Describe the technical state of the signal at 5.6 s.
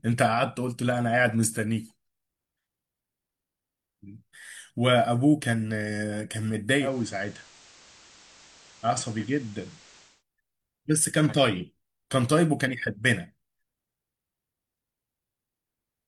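At 5.6 s the speech signal is intact, with no dropout, clipping, distortion or other audible fault at that moment.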